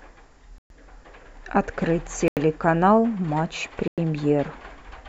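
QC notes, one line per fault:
0.58–0.70 s, Bluetooth stall: the speech drops to silence for about 119 ms and then resumes, likely because the headphone buffer ran dry while delayed packets were resent.
2.28–2.37 s, Bluetooth stall: a shorter 88 ms gap of silence, likely caused by radio interference holding back packets until retransmission refilled the playback buffer.
3.88–3.98 s, Bluetooth stall: the speech cuts out for 100 ms before picking up again, likely from the wireless link starving the buffer until packets arrived.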